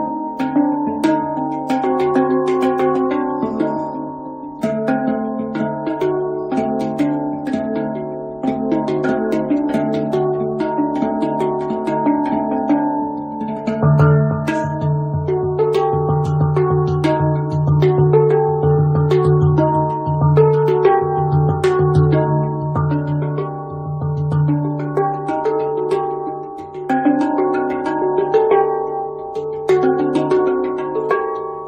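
No faults are audible anywhere in the clip.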